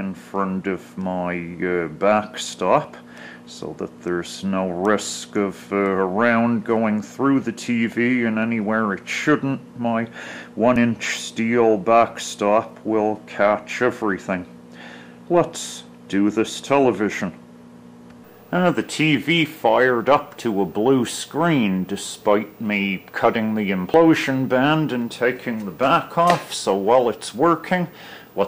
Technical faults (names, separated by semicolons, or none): dropped buffer (overrun)